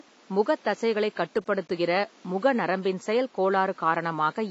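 Throughout the clip, a low-bitrate encoder has likely squeezed the speech as AAC compression, with damage that fits AAC-LC at around 24 kbps. Nothing survives above 7.6 kHz, so the sound is dull, and codec artefacts are plainly audible; room noise sits about 32 dB below the speech.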